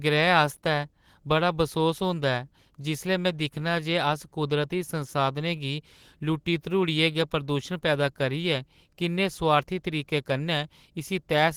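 Right through the clip there's clock drift between sender and receiver: the sending end's clock runs roughly 1.5% slow, so the jitter buffer keeps draining and the receiver has to keep stretching things out to cover the gap.

From 0.14 s to 11.25 s you get repeated timing corrections, where the receiver slips in short repeated bits, all adding time, and they total something like 150 ms. The pace sags to about 99%.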